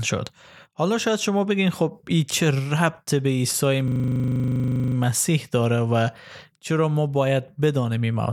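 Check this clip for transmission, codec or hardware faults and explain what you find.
There's one hardware-side fault in this speech clip. From 3.88 to 4.96 s you get a system hang loop: the machine or driver stalled while the sound card kept replaying its ring buffer, pointing to a 40 ms buffer, so one slice repeats 27 times as a rough 25 Hz buzz. Hardly any speech seems lost around it.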